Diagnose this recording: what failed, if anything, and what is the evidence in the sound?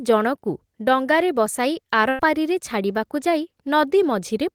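Network stage: a burst of packet loss at 2.09 to 2.21 s, after "ଜଣକୁ ଡଙ୍ଗାରେ ବସାଇ". The receiver stretched and faded the last sound. Then 100 ms of speech is missing.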